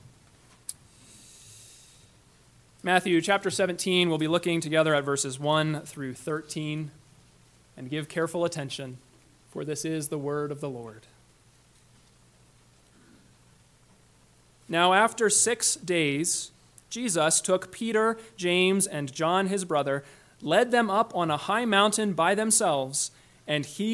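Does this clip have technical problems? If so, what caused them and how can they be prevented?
No, this clip has no technical problems, so there is nothing that caused them and nothing that needs preventing.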